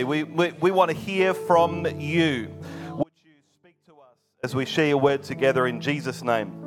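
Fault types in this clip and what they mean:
Audio dropout to a faint residue: the signal likely dropped out for about 1.4 s, leaving only a faint trace roughly 35 dB down, seen as a sharp-edged near-empty band.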